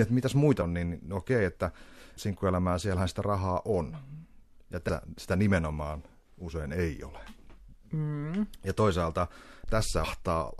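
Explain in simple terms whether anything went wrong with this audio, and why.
Damaged data in a compressed stream: part of the compressed speech file was corrupted, so the decoder misread those frames, lost its place and had to hunt for the next clean starting point. Each time this causes a brief chirp or blip. It happens three times: at 0.61 s, right after "että mitäs"; at 4.88 s, just before "sitä nimenomaan usein ei"; and at 10.03 s, near the end.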